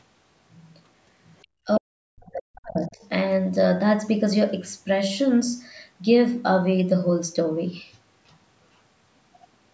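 Other side's voice leaking through appears in brief scraps at 1.42–1.47 s, 1.75–1.80 s and 3.03–3.07 s. The likely cause is residual loudspeaker echo the canceller missed: faint at first and last, much stronger around 1.75 s.

Speech suppressed in double talk runs from 1.66 to 2.98 s. The speech dips and drops out in pieces for about a second overall, falling by roughly 40 dB at worst, as the canceller likely turned both voices down.

Channel delay (comb filtering) starts at 7.37 s and lasts to the end. The sound fits a lag of about two samples, under a tenth of a millisecond, summed to mono. Its first notch near 10 kHz lies above the 8 kHz ceiling, leaving a slightly dulled top end.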